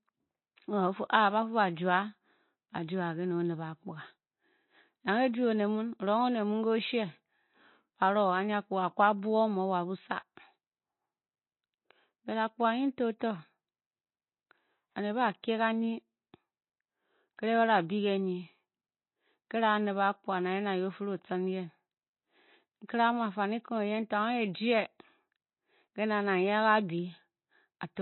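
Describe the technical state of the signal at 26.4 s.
At 26.4 s the speech carries the same damage heard across the whole clip, likely MP3 compression: nothing sounds above 4.1 kHz, and weak frequency lines drop in and out between frames, giving a plainly audible watery swirl that fits a bitrate near 24 kbps.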